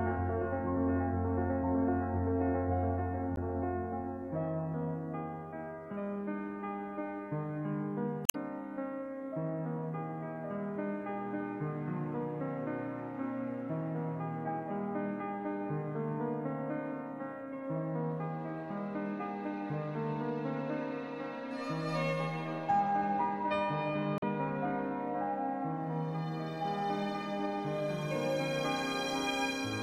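Short glitches break into the audio at 3.33 to 3.38 s, 8.23 to 8.35 s and 24.17 to 24.24 s. These come from damaged data in the compressed stream: the decoder hits corrupted frames, loses sync, and briefly outputs garbage while hunting for the next valid frame header.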